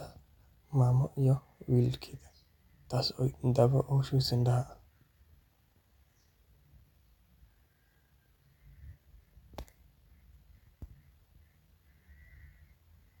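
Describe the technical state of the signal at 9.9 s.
At 9.9 s the speech signal is intact, with no audible fault at that moment.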